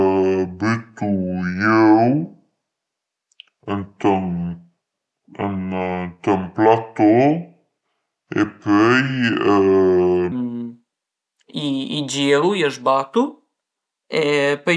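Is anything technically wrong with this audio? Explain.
Yes. From 0.0 to 10.32 s there is a wrong sample rate fault. The speech is played slower than it was captured, with no conversion, which fits audio recorded at 32 kHz and played at 22 kHz. Speed drops to about 0.69 times. Pitch falls about 6.5 semitones, so voices sound low and dragging.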